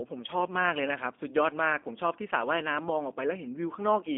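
From start to finish the speech has been through a G.729 codec, and it sounds like it. Everything above about 3.6 kHz is gone and the low end thins out below roughly 250 Hz, so it has that boxed-in phone-line feel. The codec throws away the actual waveform and resynthesises it from a vocal tract model and a few pulses per frame, so the speech stays intelligible but comes out rough and a bit synthetic, which fits an 8 kbit/s G.729A link.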